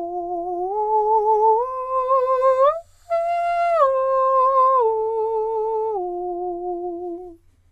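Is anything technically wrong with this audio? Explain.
No, nothing is technically wrong with this audio.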